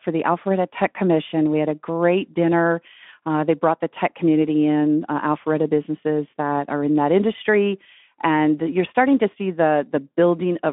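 No technical faults detected.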